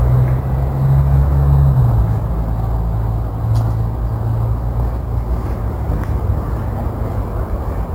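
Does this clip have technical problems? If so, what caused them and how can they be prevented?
Yes, there's imaging from sample-and-hold upsampling running the whole way through: a faint metallic fizz tracking the sound, which points to 16 kHz audio raised to 44.1 kHz by just repeating samples. The first mirrored copy lands between 8 and 16 kHz, about 35 dB down. To prevent it, upsample with a proper interpolating low-pass filter instead of a zero-order hold.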